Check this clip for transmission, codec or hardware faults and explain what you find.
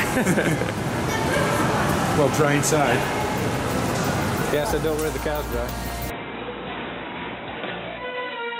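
One fault is present: at 6.1 s the sound narrows abruptly and stays that way to the end, most likely because the input switched to a poorer device. Nothing above 3.9 kHz survives after that point, so the audio turns dull and boxy. There is no gap at the switch, the level stays roughly the same, and the new background noise sits far below the signal. On a spectrogram, energy above 3.9 kHz cuts off sharply at 6.1 s.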